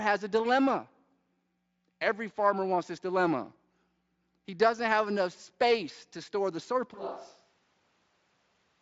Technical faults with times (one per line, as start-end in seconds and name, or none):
6.94-8.81 switch to a distant microphone